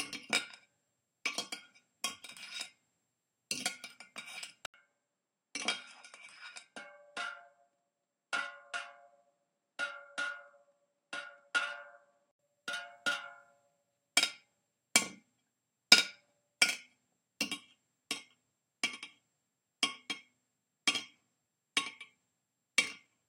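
At 4.66 s the sound drops out for about 80 ms. When it returns, it is duller and somewhat quieter, with nothing above 10.9 kHz. A faint new background noise sits far below the signal. This is an input switched to a poorer device. The recording likely moved to a different microphone or a headset's call profile mid-stream. That device passes a narrower band and has its own level and noise. The fuller sound comes back at 12.39 s.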